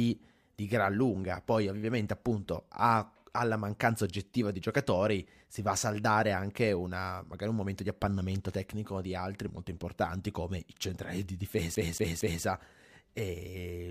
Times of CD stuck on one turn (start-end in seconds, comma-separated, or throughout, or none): 11.75-12.44